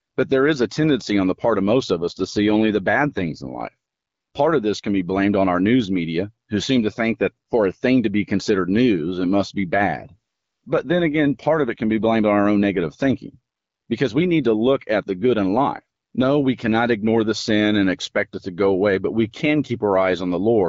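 Speech carried by the AMR wideband (HD Voice) codec, with two AMR rate drops: at 1.92–3.68 s, after "the part of most", and at 9.68–12.14 s, between "news it must be" and "on our own negative", a weak link pushes the codec to a lower rate, consistent with 12.65 falling to 8.85 kbit/s. The voice turns rougher and more synthetic, with no gap and no narrowing of the band.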